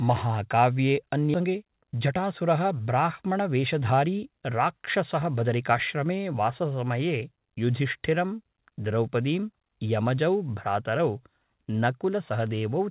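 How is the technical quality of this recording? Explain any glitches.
The recording has a sudden jump near the start followed by two stretches of hurried delivery. All of it sits on a narrowband call path with nothing above 4 kHz, which fits G.711 mu-law at 64 kbps.

At 1.34 s there is a skip ahead. The sound lurches forward with no gap, and about a second of material is simply missing, its two edges butted together. A block of queued audio was discarded, most likely by an overfull jitter buffer, so playback leapt to later audio.

From 1.40 to 4.79 s, and again from 5.19 to 6.04 s, jitter buffer speed-up makes delivery sound rushed while pitch stays unchanged. The first run plays at 111% speed and the second at 107%. The receiver trimmed many tiny pitch-period slices, nearly half a second in total in the first run and a few tens of milliseconds in the second, to drain its excess backlog.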